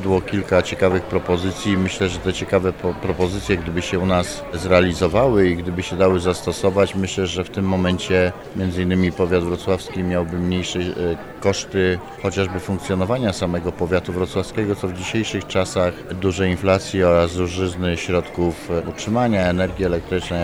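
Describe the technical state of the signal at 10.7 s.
At 10.7 s the signal is intact, with no audible technical fault at that moment.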